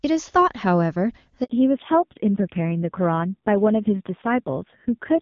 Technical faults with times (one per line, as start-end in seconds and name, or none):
1.44-1.50 handover gap
1.50-5.21 fallback to narrowband